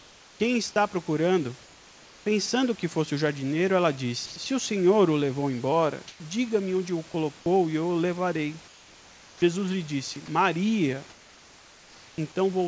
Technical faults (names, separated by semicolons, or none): comfort noise in place of the background; sound dropped by the voice detector; sound chopped by the voice detector